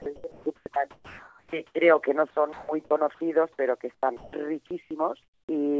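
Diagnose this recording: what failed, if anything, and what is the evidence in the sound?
Sound chopped by the voice detector, call processing stage. From 0.02 to 1.75 s and 2.53 to 2.91 s, sound flickers with synthetic noise. A likely gating voice detector.

Comfort noise in place of the background, call processing. At 3.95–4.33, 4.67–4.91 and 5.23–5.49 s, flat noise replaces the background. The last stretch is about 9 dB quieter. Likely discontinuous transmission.

Onset clipped by the voice detector, call processing. At 4.01 s, sound starts abruptly, missing about 20 ms of its beginning. The detector likely triggered late.

Sound dropped by the voice detector, call processing. At 4.67–4.71 s, about 20 ms of sound gives way to steady noise. The detector likely mistook it for background.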